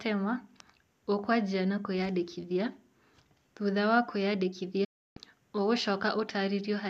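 From 4.84 to 5.17 s, a digital broadcast dropout: the receiver loses valid frames and mutes, so the speech fades out within 8 ms, then returns.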